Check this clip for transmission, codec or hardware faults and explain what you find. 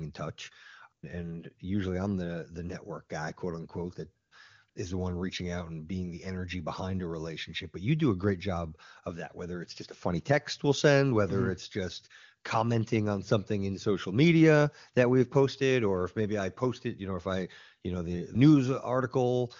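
One fault shows up: AMR comfort noise, in two brief gaps at 4.27 to 4.31 s (40 ms) and 4.69 to 4.75 s (60 ms). The sending phone judged the talker silent and stopped sending speech frames, so the receiver filled each gap with synthetic noise built from a rough level and spectrum estimate. The real background drops out for a moment and is replaced by a smooth, steady hiss that switches in and out.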